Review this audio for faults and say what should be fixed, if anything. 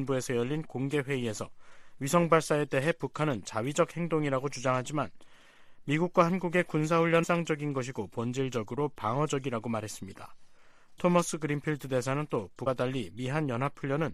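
There are two short glitches from damaged data in a compressed stream, at 7.22 to 7.24 s and at 12.66 s. Corrupted bytes make the decoder misread those frames and lose sync until it finds the next good frame header. To prevent it, check the file's integrity after transfer or re-encode from a clean source.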